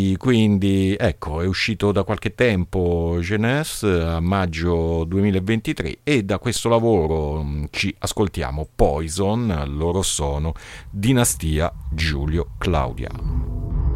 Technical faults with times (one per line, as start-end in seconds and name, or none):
6.56 DC step